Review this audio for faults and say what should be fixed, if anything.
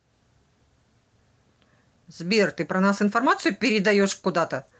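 No faults; nothing needs fixing.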